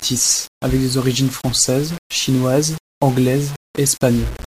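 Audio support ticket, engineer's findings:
Low bit depth without dither, throughout the speech. Grainy, buzzy distortion riding on every syllable, changing as the level changes. Quiet tails turn gritty, then sputter or drop out. Error sits only about 20 dB below the signal. Likely cause: a 5-bit conversion stage rounding samples with no dither, so the error tracks the waveform instead of spreading as steady hiss.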